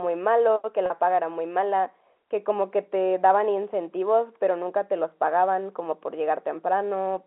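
A speech clip over a G.711 telephone path, so everything sits in the narrow 250 Hz to 3.4 kHz line band. The fault is packet loss with pitch repetition at 0.86 to 0.90 s, where about 40 ms of audio goes missing, which fits a couple of dropped 20 ms packets. The receiver patched the hole by looping the last pitch period, so you hear a brief held, slightly buzzy tone before the speech picks back up.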